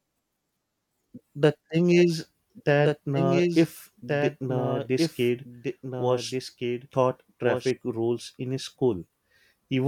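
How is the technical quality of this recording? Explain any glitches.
The recording has one clear glitch: a doubled audio track. From 2.57 s to 7.71 s, just before "rules in", the speech plays twice. A second copy trails the original by about one and a half seconds, roughly 5 dB quieter. It is full-band and dry, with no decay or room colour. It cuts in and out abruptly. The likely cause is a second, slower capture path or an edit leaving two copies out of step.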